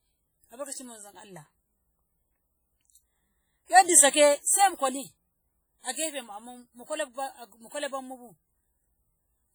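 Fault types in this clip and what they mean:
WMA compression: throughout, the speech rings and smears with hiss that breathes with it, likely a transform codec at what sounds like 32 kbps, heavily zeroing weak components.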